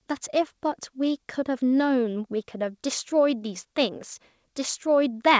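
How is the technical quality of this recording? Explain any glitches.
The technical quality of this recording holds up, with no glitches to explain.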